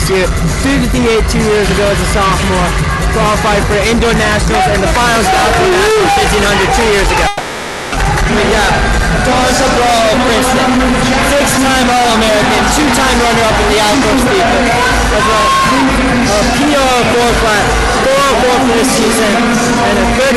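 At 7.27 s the sound stops moving forward and a smeared continuation of its last moment fills the gap until 7.95 s, a call audio freeze of about 650 ms. The likely cause is delayed packets draining the jitter buffer. On a spectrogram the final spectrum stretches out as flat horizontal bands that fade. Nothing is lost; later material simply arrives late.

From 8.28 to 8.32 s comes a skip ahead: roughly a third of a second of audio is discarded to recover the built-up delay. The two sides are joined almost directly, so the waveform shows an abrupt splice and the spectrogram a sudden vertical change in pattern, heard as a jump.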